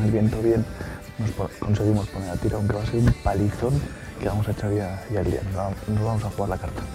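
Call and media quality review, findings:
Periodic USB or driver dropouts. Regular ticks every 0.5 s, 0.08 to 6.57 s. Bus or driver stalls skip about a millisecond of sound each time, with no silence fill.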